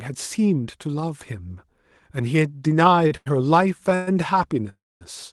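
At 3.07 to 3.13 s and again at 3.17 to 3.28 s, the speech shows two short stalls from a late packet. Each time the jitter buffer emptied, and the receiver held the last sound for about 33 ms and then 92 ms before resuming from the same point. Nothing is lost, but the sound sits briefly on one spot with a faint buzz or dip, pushing everything after it later by the held amount.

Two longer interruptions follow that behave like a call audio freeze, likely caused by packets delayed in transit until the buffer ran dry. From 3.95 to 4.09 s the last sound is extended for 120 ms as a fading buzz or hiss before the speech resumes. From 4.69 to 5.03 s the fill lasts 314 ms and decays into about 240 ms of silence before the audio continues where it stopped, so a gap is inserted rather than content removed.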